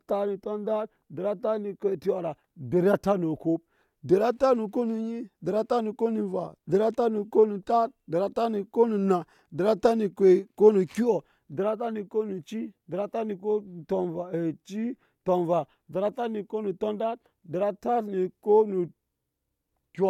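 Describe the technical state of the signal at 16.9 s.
At 16.9 s the speech signal is intact, with no fault audible at that moment.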